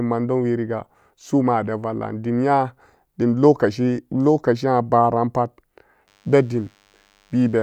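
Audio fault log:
6.07–7.63 s, DECT cordless phone buzz: a faint, thin, steady buzz with many harmonics runs under the speech to the end of the clip, well below the speech level. A nearby DECT handset or base sends radio bursts 100 times a second, and the audio circuit rectifies them into this 100 Hz buzz.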